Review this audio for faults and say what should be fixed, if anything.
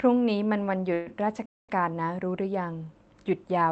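A call audio freeze runs from 0.93 to 1.08 s. The speech stops moving forward and a fading buzz fills about 129 ms. Nothing is lost. The speech resumes exactly where it halted, now running about 129 ms later than before. The likely cause is packets held up in transit, which emptied the jitter buffer. The receiver stretched the last sound to cover the wait. The call path itself sounds band-limited to about 8 kHz. A larger or adaptive jitter buffer on the receiving end would absorb delays of this size.

A playback stall follows from 1.46 to 1.69 s. The output goes completely silent for about 227 ms in mid-flow. Unlike the freeze, there is no filler sound, only a hard dropout. Then the speech carries on. The likely cause is the player running short of data or its audio thread being blocked. A larger playback buffer and keeping the audio thread clear of blocking work would prevent this.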